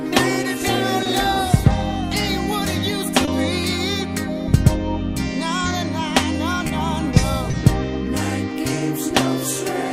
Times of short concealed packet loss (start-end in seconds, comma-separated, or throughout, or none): 1.03-1.07, 3.25-3.29, 6.67-6.71, 7.51-7.55